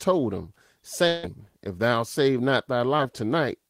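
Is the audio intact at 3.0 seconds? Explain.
No. Just after "thou save not", from about 2.97 to 3.01 s, there is a brief smear where the sound briefly blurs. This is short concealed packet loss: about 20 ms of the call arrived too late, so the receiver extended the preceding sound to bridge the gap before rejoining the real signal.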